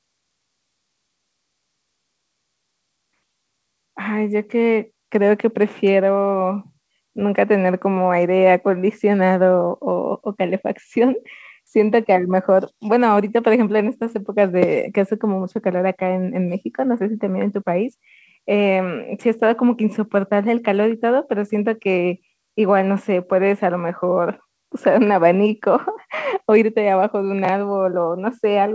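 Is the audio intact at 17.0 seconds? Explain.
Yes, the speech at 17.0 seconds is intact, with nothing breaking up the sound at that moment beyond the normal call-path band limit that leaves nothing above 8 kHz.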